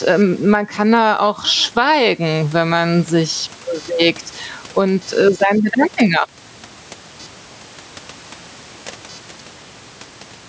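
From start to finish, computer activity noise runs under the speech as a chirping buzz pulsing around 500 times a second, roughly 35 dB below the voice. Processor, graphics or mouse load is disturbing the audio circuit's shared ground. Unlike steady mains hum, it rises and falls with the machine's activity, not with the sound.

Gain pumping is also present throughout. The gain swings by around 10 dB, so the level feels squashed. Ordinary room noise holds a constant level, which is what sets this apart. The likely cause is microphone gain set far too high, with a fast limiter pulling it down on each peak.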